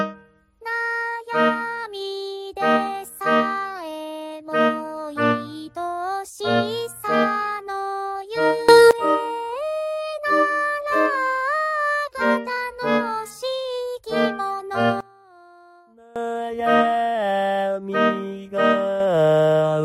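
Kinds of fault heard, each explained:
Sudden gain jump: the level steps up about 20 dB at 8.69 to 8.91 s, down about 22 dB at 15.0 to 16.2 s, and up about 6 dB from 19.0 s on, with the background noise moving along with it. The likely cause is a digital gain change applied instantly, without a ramp.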